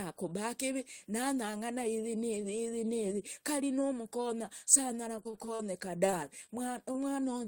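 From 5.23 to 5.61 s the speech turns choppy and robotic from repeated packet loss: five separate gaps, the longest 36 ms, are each patched by extending the preceding sound, so about 30% of that stretch is synthetic and roughly 80 ms of real audio is gone. Unlike an isolated loss, the holes arrive in quick succession, giving a sustained stuttering texture.

From 6.06 to 6.10 s there is a short stall from a late packet. The jitter buffer ran dry, so the last sound was held for about 21 ms until the packet arrived, then playback resumed where it left off. It is heard as a slightly prolonged sound, and nothing is skipped, which is what separates it from a loss.

Short concealed packet losses follow at 6.10–6.14 s, 6.46–6.50 s and 6.92–6.96 s. In each, about 20 ms of audio never arrived and was filled by continuing the previous sound before blending back. Each is a brief smear or wobble where a fragment really disappears, unlike the stall.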